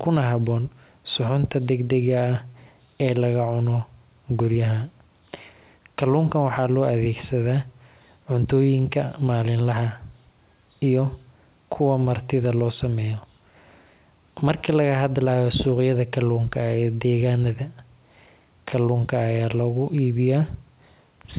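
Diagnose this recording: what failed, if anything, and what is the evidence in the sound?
A short stall from a late packet sits at 2.52 to 2.57 s, at the network and jitter-buffer stage. A sound is briefly held, about 16 ms of stretched fill, then resumes exactly where it stopped. Unlike a lost packet, nothing is skipped; the stream simply runs 16 ms later. The band-limiting to 4 kHz fits a G.711 mu-law call path.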